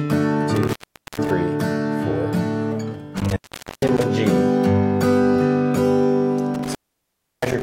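An intermittent contact breaks the signal three times: 0.55 to 1.30 s, 3.17 to 4.03 s, and 6.54 s to the end. A loose cable or plug opens briefly. The sound drops out for about 0.45 s, 0.44 s, then 0.68 s. Crackle marks each edge. Faint hiss fills the gaps.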